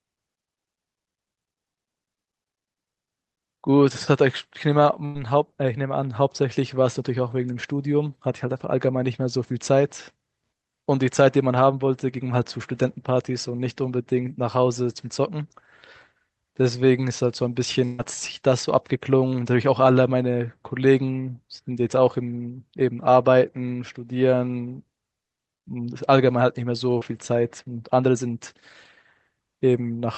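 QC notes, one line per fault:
5.05–5.17 s and 17.85–18.01 s, burst of packet loss: roughly 100 ms and 140 ms of sound are lost. The receiver stretches the last sound into a held buzz or hiss that fades, then resumes later with that stretch skipped. The length and audible jump set this apart from a brief smear.
26.99–27.03 s, short concealed packet loss: about 20 ms goes missing and is patched by extending the preceding sound for about 26 ms before blending back. It is heard as a quick smear or wobble, with no fading hold.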